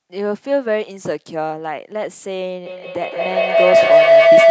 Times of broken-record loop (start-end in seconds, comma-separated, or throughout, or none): none